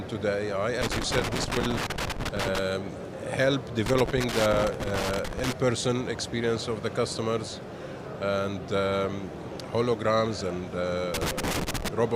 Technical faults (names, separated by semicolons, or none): loose connector crackle